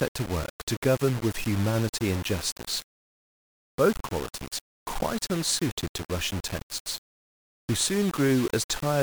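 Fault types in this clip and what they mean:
Low bit depth without dither: grainy, signal-following distortion throughout the speech, likely from rounding to about 5 bits, with error only around 15 dB below the signal.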